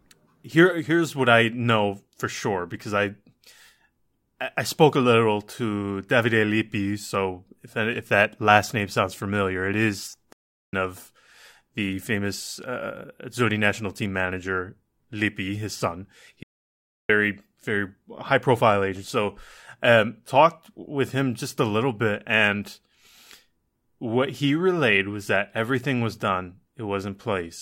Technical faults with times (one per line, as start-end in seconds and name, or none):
10.33-10.73 playback stall
16.43-17.09 playback stall